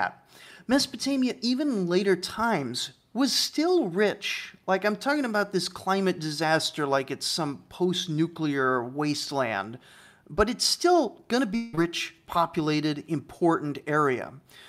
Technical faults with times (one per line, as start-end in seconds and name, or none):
11.55-11.75 long network dropout
11.75-11.79 short concealed packet loss